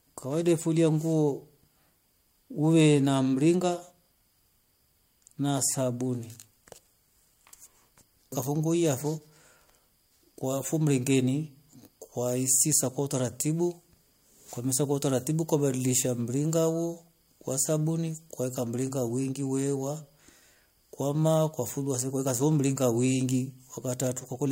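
No technical faults are audible anywhere in the speech recording.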